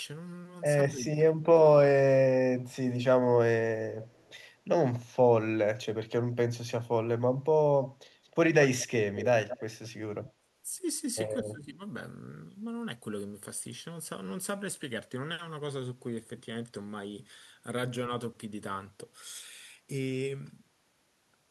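From 0.91 to 1.58 s the talker's level sinks in patches, by about 15 dB at its deepest, for roughly half a second in total. This is speech suppressed in double talk, likely caused by an echo canceller that could not separate the near talker from loudspeaker echo while both sides spoke and turned everything down. Unlike a dropout, the level dips in patches.

At 4.03 to 4.30 s a faint delayed copy of the speech trails about 259 ms behind, roughly 30 dB below the direct sound. This is echo leak, likely residual loudspeaker pickup that the canceller failed to remove and that was sent back. It returns from 9.48 to 9.62 s at a 213 ms delay and a stronger level, about 15 dB down, then from 9.83 to 9.89 s near 30 dB down. Unlike room reverberation, it is a distinct delayed repeat, not a smooth decay.

Suppression recurs from 10.21 to 10.48 s, a dip of about 15 dB over roughly 150 ms, and from 11.41 to 11.81 s, deeper at about 20 dB across roughly 400 ms.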